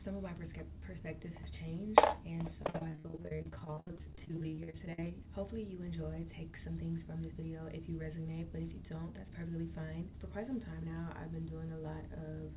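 From 2.62 to 5.06 s there is repeated packet loss with a robotic sound: 54 short holes, the longest 67 ms, are each filled by stretching the last sound, covering about 44% of the span. Unlike a single dropout, this gives a choppy texture with pieces missing.

Overlapping its end, from 4.60 to 5.26 s, a jitter buffer speed-up trims pitch-period slices, around 50 ms in all, so the audio runs at 107% speed. The pitch stays put, which separates this hurried feel from a resampling error.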